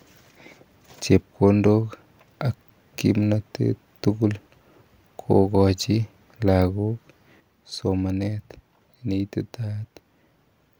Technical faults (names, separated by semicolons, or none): sudden gain jump; dropped samples